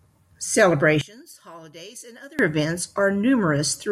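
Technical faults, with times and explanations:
1.01–2.39 s, one channel inverted: the speech falls about 22 dB to a faint trace, likely from one channel's reversed polarity cancelling the centred voice when summed to mono.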